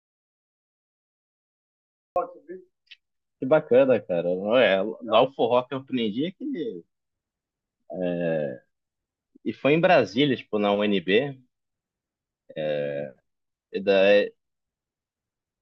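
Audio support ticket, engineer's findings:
Input path dead from clip start, likely a disconnected device, failed link or stray mute, while recorder kept writing silence. Audio dropout to silence, 0.00–2.16 s: silent gap, no room tone; speech then cuts in abruptly at 2.16 s. Opening speech lost.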